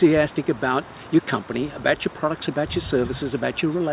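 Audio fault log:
No faults detected anywhere in the clip.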